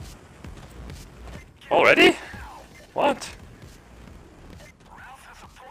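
A block size mismatch (padded) runs throughout. Each block carries a zero-filled gap, giving a 43.1 Hz buzz, which fits a 1024-sample read block. The audio plays at 0.938 times normal speed, with its timbre kept.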